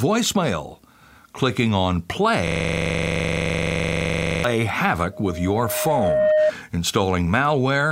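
Speech recording with two problems. From 2.47 to 4.44 s there's a system hang loop: a 42.67 ms chunk repeats dozens of times, buzzing at about 23.4 Hz, which fits a 2048-sample buffer stuck cycling. Then from 5.13 to 6.52 s a loudspeaker feedback squeal sets in, a 616 Hz tone swelling over about a second to roughly 5 dB above the speech as the mic feeds back through the speaker.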